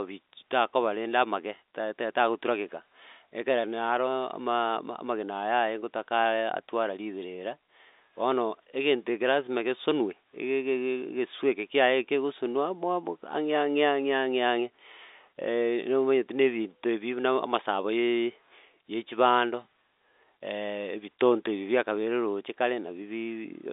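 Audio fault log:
Nothing stood out on listening: the speech comes across as ordinary telephone-band audio, with no events worth logging.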